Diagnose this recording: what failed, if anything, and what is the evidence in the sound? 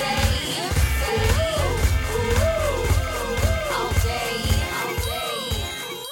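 Throughout the music, a full-band copy trails about a second behind at roughly 5 dB lower, with no decay: a doubled audio track, likely from a slower second capture path.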